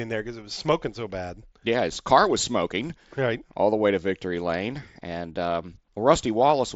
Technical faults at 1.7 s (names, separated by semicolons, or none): none